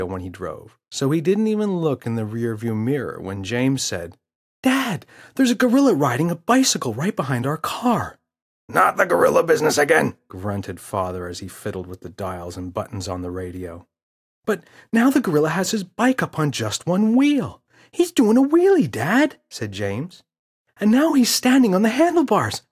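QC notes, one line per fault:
No faults were heard in this clip. Nothing needs logging on this pass.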